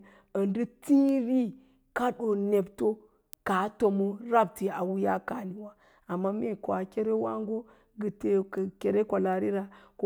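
From 0.34 s to 9.33 s, word clock ticks recur roughly every 0.7 s, about fifteen sharp clicks of uneven strength. A receiver clock drifting roughly 30 ppm from the sender slips one sample each time.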